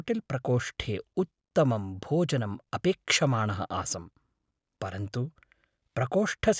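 No technical faults can be heard anywhere in the recording, with the speech signal passing intact and without any break, dropout or added disturbance.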